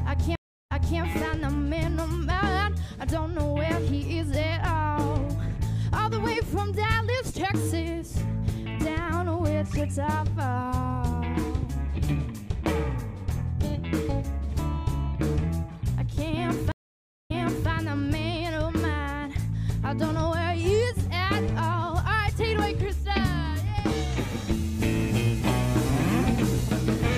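Stream reconnects at 0.35–0.99 s and 16.72–17.69 s: the connection breaks, the waveform goes flat for 0.32 s and then 0.55 s, and a restarted decoder replays audio from 0.31 s and 0.42 s earlier.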